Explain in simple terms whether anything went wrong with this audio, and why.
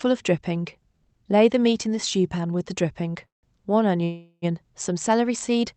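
The speech stalls twice in a call audio freeze, at 3.25 to 3.46 s and 4.04 to 4.45 s. Packets were likely held up, so gaps of 0.18 s and 0.38 s were filled in. The speech then resumes where it paused, with nothing lost.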